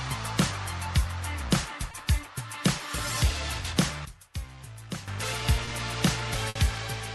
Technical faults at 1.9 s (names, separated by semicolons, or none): short concealed packet loss